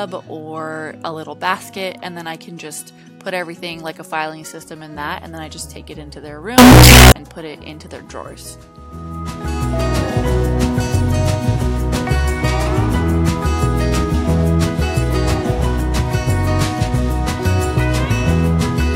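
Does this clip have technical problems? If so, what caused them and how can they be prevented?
Yes. From 6.58 to 7.12 s there is what sounds like float read as integer: samples likely stored as 32-bit float were interpreted as 32-bit integer, so each value's sign and exponent bits, not its actual amplitude, decide the output level. The waveform turns almost square at an almost fixed, high level, and the sound becomes abruptly very loud and harsh, with background noise pushed up to the same level as everything else, although the pitch can still be followed. To prevent this, make sure every stage that reads or converts the audio declares and checks the sample format so float data is never handed to an integer reader.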